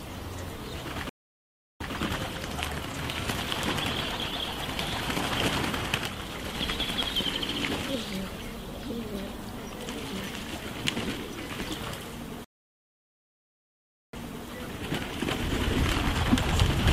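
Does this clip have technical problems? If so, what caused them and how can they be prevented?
Yes. A stream reconnect occurs twice: the connection dropped and a fresh decoder restarted mid-stream. Sound stops at 1.09 s for 0.71 s, resuming 0.12 s earlier; at 12.44 s it stops for 1.69 s, resuming 0.34 s earlier, repeating material. Deeper buffering with resume-at-exact-offset reconnection would prevent this.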